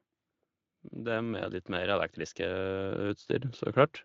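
From 0.7 s to 3.3 s, the automatic gain control judges the input too quiet and keeps raising its gain, climbing by about 10 dB over those 2.6 seconds. Because the whole signal is amplified, speech and background noise swell together in a slow, steady ramp rather than a jump. The light Speex coding stays faintly audible beneath the rise.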